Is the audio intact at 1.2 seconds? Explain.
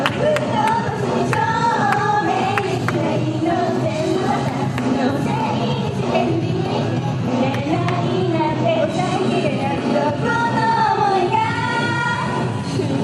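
Yes, at 1.2 seconds the audio is intact, with no dropout, click, distortion or other fault to be heard at that moment.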